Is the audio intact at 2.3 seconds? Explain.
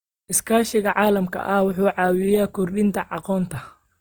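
No. At 2.3 s, as across the whole clip, the speech has likely been through Opus compression, with the sound pointing to the codec's music (CELT) mode at a low bitrate of about 24 kbps. When bits run short, each band's energy is kept but its detail is refilled by folding lower bands or with noise. The damage is plainly audible: the speech turns grainy and rough, though the bandwidth stays full, reaching 20.2 kHz.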